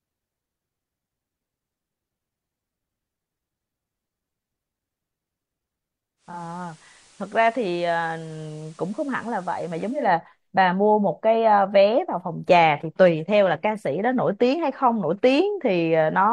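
At 6.16 s the speech fades over about 278 ms into an FM copy. This is digital radio blending to analogue. The receiver lost the digital signal. Level drops about 4 dB, and faint hiss appears. It blends back at 10.14 s.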